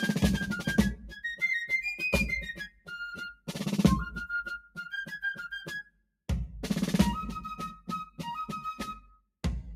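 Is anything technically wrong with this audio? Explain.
Yes. A noise suppressor designed for speech has been applied to music. Across the clip it treats sustained tones, ambience and reverb as noise and pulls them down, so the level swings by around 10 dB. Attacks pass while held notes and tails sink, which makes the music pump and thin out. On a waveform the envelope breathes unevenly. On a spectrogram sustained partials and decay tails fade early and look patchy between onsets.

The noise suppressor also cuts specific stretches of sound, each lasting a few tenths of a second: 0.96–1.24 s (about 11 dB), 2.6–2.9 s (about 19 dB), 3.33–3.52 s (about 21 dB), 4.6–4.78 s (about 18 dB), 5.83–6.23 s (about 21 dB) and 9.0–9.39 s (about 21 dB). In each one the suppressor judged the steady or fading material to be noise, so the sound suddenly hollows out or its decay is chopped short. These show as sharp dips in the waveform envelope and as dark gaps across the spectrogram.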